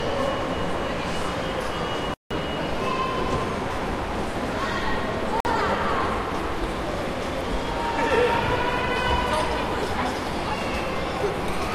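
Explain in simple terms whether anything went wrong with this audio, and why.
The sound cuts out to silence twice: first from 2.14 to 2.31 s, a gap of about 170 ms, then again from 5.40 to 5.46 s, about 50 ms. Each time it picks up later rather than where it stopped. This is a digital broadcast dropout. The receiver briefly lost the signal, or got damaged chunks of data, and went quiet until clean data arrived. Whatever was sent during those gaps is simply missing.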